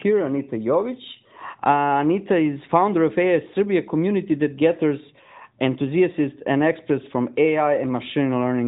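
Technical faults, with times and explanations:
No technical faults heard.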